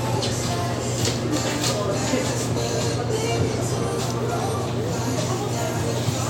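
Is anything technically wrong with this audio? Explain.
Yes. At 4.10 s a sharp snap, an electrical switching spike, sits on top of the audio, peaking around -15 dBFS. A nearby switch or discharge arcing into the line is the likely cause. Unlike a dropout click, the underlying sound carries on uninterrupted beneath it.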